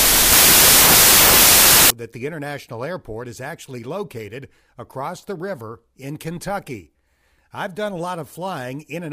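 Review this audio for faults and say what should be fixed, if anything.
From the start to 1.90 s, just before "that the", the speech shows a wrong sample width fault. Packed 24-bit samples are read as 16-bit, so each value mixes bytes from neighbouring samples and only some keep the true top bits. The result is loud, harsh noise with the speech buried inside, slowed to 0.667 times speed and lowered in pitch. The waveform looks like dense, loud hash, and the spectrogram shows broadband noise over faint, compressed harmonics. To prevent it, take the sample format from the file header and check it at every stage that unpacks the samples.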